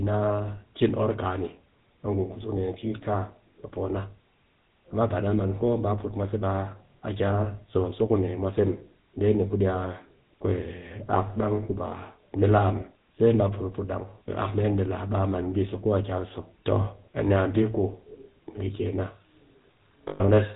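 From the start the speech has the buzzy, gravelly roughness of the GSM full-rate codec, with nothing above 4 kHz, which fits a 13 kbps full-rate coder. The vocal tract is modelled and driven by sparse regular pulses, so the grit is a steady texture, not narrowband hiss or swirling artefacts.

From 20.08 to 20.21 s, lost GSM frames leave a rough, metallic ring. The last good frame's settings are repeated for 120 ms, which points to six lost frames. This held tone differs from a clean dropout to silence.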